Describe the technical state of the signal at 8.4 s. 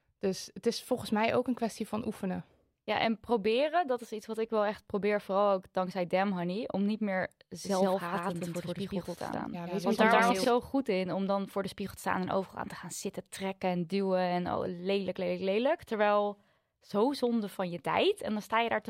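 At 8.4 s a doubled audio track is playing: the speech has likely been captured a second time through a slower path, so an equally loud, full-band copy trails about 150 ms behind. From 7.64 s, after "om niet meer", to 10.44 s, before "goed in om dan", each syllable repeats as a dry, abrupt echo.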